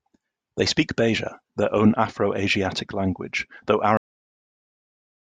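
At 3.97 s, right after "language though", the speech hits a cut-off end. The final buffers were never written, so the sound stops mid-utterance and falls straight to digital silence. Unlike a fade or a mid-clip dropout, nothing decays and nothing returns.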